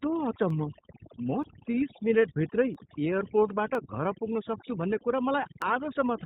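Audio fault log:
throughout: overdone noise removal, noise reduction set too hard mutes bands near its noise estimate, leaving near-silent background with twinkling specks.
throughout: iLBC codec, narrowband coding of 30 ms frames at 13.33 kbps cuts everything above 4 kHz, making the speech plainly rough and slightly synthetic.
0.50, 1.44, 2.75, 3.75, 5.62 s: dropped samples, each a single sharp click where the waveform jumps ahead, likely from a fraction of a millisecond of samples going missing.
1.71 to 1.74 s: lost iLBC frames, one 30 ms frame missing, filled by the decoder repeating the last pitch cycle with noise, heard as a brief buzzy held vowel before recovering.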